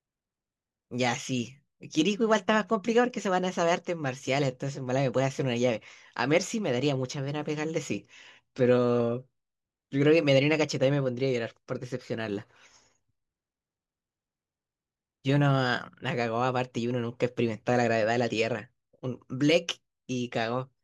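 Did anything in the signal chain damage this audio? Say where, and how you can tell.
No, nothing in the chain audibly damaged this speech recording at any stage.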